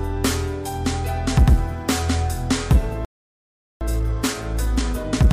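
At 3.05 s the sound cuts out mid-flow and stays silent for about 0.76 s, resuming at 3.81 s. This is a playback stall, most likely the player running short of buffered data or its output thread being held up, so nothing reached the output until it recovered.

From 3.81 s to the end at 5.32 s the audio runs hurried, about 1.15 times normal speed, yet keeps its pitch. This is time-compressed catch-up: the player trims its backlog by cutting out small slices and cross-fading across the joins.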